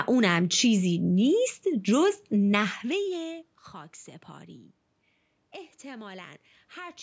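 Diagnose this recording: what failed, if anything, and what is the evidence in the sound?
Nothing failed; no fault found.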